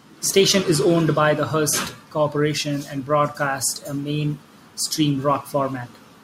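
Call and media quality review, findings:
Nothing stood out on listening to the speech recording; no findings to log.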